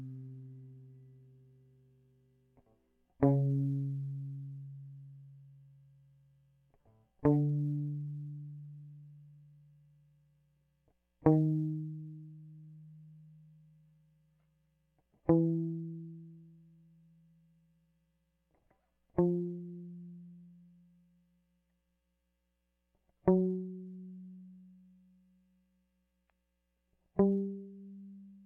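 No technical faults can be heard anywhere in this music recording. There are no dropouts, glitches or other disturbances at any point.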